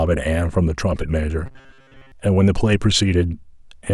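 From 1.46 to 2.12 s the speech turns into a rigid, metallic buzz at 134 Hz that only loosely follows the original. This is likely robotic sound from repeated short buffers: a roughly 7.5 ms segment replayed while most of the late-arriving audio was skipped.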